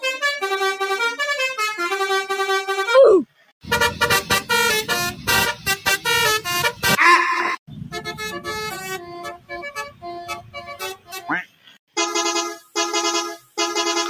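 Right from the start there's a noise suppressor applied to music or sounds. It's a speech-tuned suppressor, and it keeps treating sustained material and tails as noise, so the level swings by around 10 dB as it clamps and releases. Attacks punch through, while anything held sags behind them, which gives the whole clip a pumping, slightly hollow feel.

On top of that there are specific spots where sound gets cut by the noise suppressor harder than elsewhere. From 3.25 to 3.67 s it dips by about 20 dB, then more gently at 5.56 to 5.86 s, about 8 dB. From 7.67 to 8.21 s the drop is about 14 dB. The big one runs from 8.98 to 11.97 s, reaching about 21 dB down at its deepest, with about two seconds affected in all. Later there are shorter bites at 12.58 to 12.76 s, about 13 dB, and 13.37 to 13.58 s, about 15 dB. Each time the decaying or steady part sinks away and the onsets mostly survive.

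From 12.08 s to the end there's also low bit depth with dither. The resolution drops to what sounds like roughly 7 bits, and since dither was added before rounding, the quantisation error comes out as a flat, constant hiss rather than gritty distortion. That hiss sits only about 25 dB under the signal, so it's clearly audible through the last couple of seconds.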